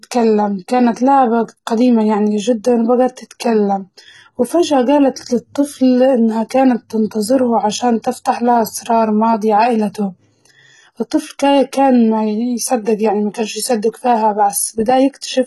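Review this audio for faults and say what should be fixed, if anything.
The speech sounds gritty and metallic in its treble throughout, and nothing is heard above 11.9 kHz. The likely cause is heavy HE-AAC compression. The upper band is rebuilt by copying lower bands upward. So the s sounds lose their true detail. The damage fits a bitrate around 16 kbps. To prevent it, encode at a much higher bitrate, or with plain AAC rather than HE-AAC.

There is pre-echo at 6.49 s. A hiss of about 16 ms arrives just before a sharp attack. The codec spreads its noise over a whole block. Noise sized for the loud onset therefore fills the quiet moment before it. To prevent it, use an encoder that switches to short blocks on transients, and give it more bitrate.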